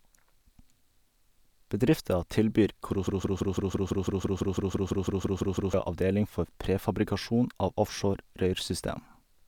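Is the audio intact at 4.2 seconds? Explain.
No. At 4.2 seconds the speech is caught in a broken-record loop running from 3.07 to 5.74 s: a 0.17 s fragment repeats back to back 16 times, giving a rapid, mechanical stutter. The likely cause is a stall in playback or streaming, with the last buffered fragment resent until the stream resumed, so the speech due in that span is lost. On a spectrogram or waveform, identical blocks tile the span at exact 0.17 s intervals.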